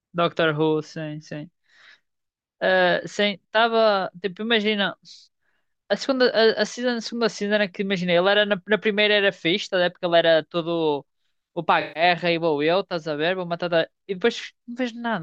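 At 11.80 s the speech shows AAC frame loss with concealment, lasting until 12.03 s. About 150 ms of coded audio went missing, which fits a run of around seven lost AAC frames. The decoder bridged the gap by reusing the last good spectrum with randomised phase and estimated energy rather than true content, so the passage comes out smeared and noisy, with a phasey, washed-out quality before clean decoding resumes.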